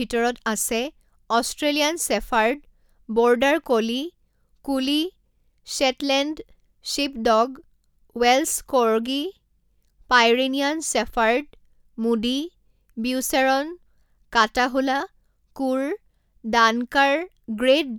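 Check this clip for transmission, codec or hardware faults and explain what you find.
Nothing stood out on listening to this speech recording.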